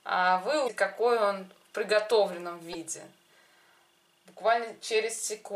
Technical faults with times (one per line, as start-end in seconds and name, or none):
0.64-0.70 damaged data in a compressed stream
2.72-2.75 damaged data in a compressed stream